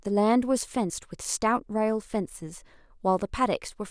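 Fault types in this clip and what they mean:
No faults can be heard anywhere in this recording.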